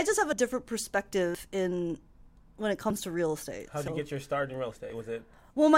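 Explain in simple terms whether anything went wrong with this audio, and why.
The speech jumps forward at 0.33, 1.35 (just before "in when it"), 2.90, 3.88 and 4.90 s, each time losing a few hundredths of a second. This is likely a dropped buffer (overrun): the recorder fell behind and lost chunks. Unlike a dropout, there's no gap of silence, only a skip.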